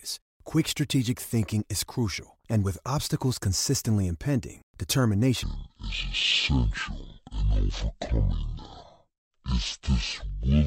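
A speech recording with a section at the wrong speed: from 5.43 s to the end, playback runs at half speed, so the speech drops roughly ten semitones and drags slowly, with pitch and tempo shifting together. This likely comes from that segment being resampled or played against the wrong clock rate.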